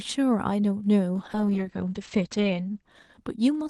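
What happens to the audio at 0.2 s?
Nothing goes wrong at 0.2 s: the speech there is intact and plays through without any fault.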